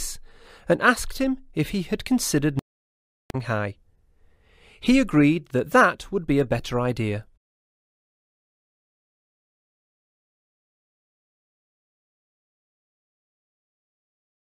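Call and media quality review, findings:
Playback stall, 2.59–3.30 s: output drops to silence mid-flow for about 0.71 s, then sound returns. Likely the player's buffer running dry or its output thread being blocked, so no samples reach the device until it recovers.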